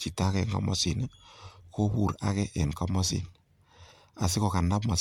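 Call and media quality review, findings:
Whole clip, speech: swirly, hollow, smeared texture, consonant attacks blurred, no content above 19.9 kHz. Likely generation loss from repeated lossy re-encoding, about three passes, fits 96 kbit/s MP3. Each pass requantises on a shifted frame grid, so artefacts compound.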